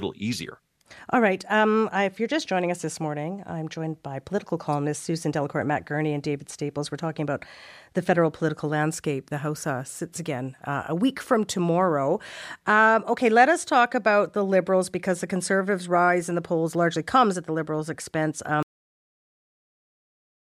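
At 18.63 s the speech has a cut-off end. The final buffers were never written out or played. The sound stops mid-syllable and falls straight to digital silence, with no natural decay. That silence runs for the last 1.9 s.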